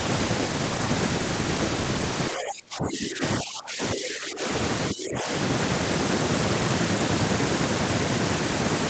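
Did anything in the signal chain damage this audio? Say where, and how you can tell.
Yes, at the call-processing stage: speech suppressed in double talk, from 2.31 to 3.23 s (dips of about 25 dB), 3.41 to 4.45 s and 4.91 to 5.29 s. The voice dips while the far side plays, pointing to an echo canceller likely turning down this talker along with the loudspeaker echo.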